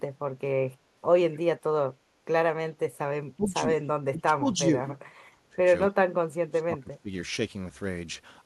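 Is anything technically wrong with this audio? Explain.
Yes. Echo leak at 1.32–1.39 s: a very faint copy of the speech returns about 250 ms late, likely from a far-end echo canceller letting loudspeaker pickup through. Speech suppressed in double talk at 3.36–3.53, 4.0–4.59, 5.51–5.63 and 6.5–7.11 s: the speech dips by roughly 10 to 20 dB, deepest near 6.5–7.11 s, likely as the canceller turns down both its own talker and the loudspeaker echo.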